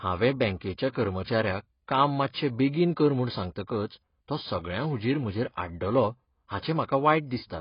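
From start to finish the speech sounds dull and smeared, with a watery, warbling fizz on sibilants, likely from heavy AAC compression at a very low bitrate, around 16 kbps. A spectrogram shows a hard ceiling near 5.1 kHz.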